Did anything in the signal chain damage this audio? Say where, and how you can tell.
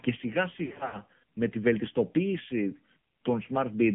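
Yes. At the codec stage, the whole clip shows AMR narrowband mobile codec damage. The speech is band-limited to about 150 Hz to 3.4 kHz, with a buzzy, synthetic quality from the pulse-excited vocal tract model. That points to a low rate near 7.4 kbps, not a plain telephone band filter, which would leave the voice natural.

At the network stage, from 0.66 to 0.99 s, lost AMR speech frames leave about 180 ms of dropouts scattered over roughly 280 ms, with the longest run about 80 ms. The decoder repeats the last pitch and vocal tract settings while fading the gain. The result is stretched, warbling sound, not the hard silent gaps of a buffer underrun.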